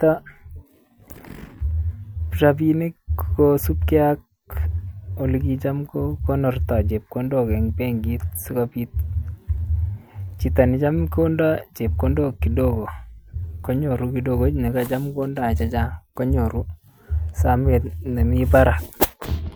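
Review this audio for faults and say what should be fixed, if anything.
Nothing stood out on listening, so there is nothing here that needs fixing.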